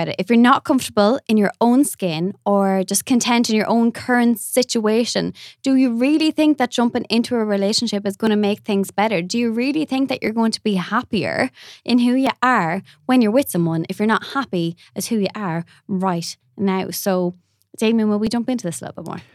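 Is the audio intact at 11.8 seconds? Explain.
No. From 8.27 to 18.27 s, just after "into a relationship is", regular ticks every 2.0 s come from periodic USB or driver dropouts skipping about a millisecond of audio each time.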